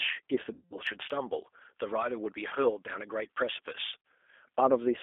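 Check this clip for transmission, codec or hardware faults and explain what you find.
Three kinds of fault are present: codec coding damage throughout, three packet-loss gaps, and a treble boost left uncorrected.

The G.729 codec, here the G.729A variant, runs for the whole clip. It models speech with a vocal tract filter, a pitch predictor and a few pulses per frame. The sound sits in a narrow 250 Hz to 3.5 kHz line band. It has a plainly audible rough, synthetic edge, which fits an 8 kbit/s stream.

VoIP packet loss concealed by the speech codec occurs three times. The longest runs from 0.53 to 0.78 s, with about 180 ms of audio missing. Shorter gaps fall at 2.49 to 2.53 s and at 4.06 s. The decoder fills each gap by repeating its last pitch and filter state at falling gain. The result is a buzzy, fading smear, and the sound stays weak just afterwards.

Pre-emphasis is left on from 0.89 to 4.59 s. 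A J.17 treble boost was applied and the matching cut never followed. The top end is raised by about 11 dB at 10 kHz relative to 1 kHz. The sound turns thin, bright and hissy on sibilants.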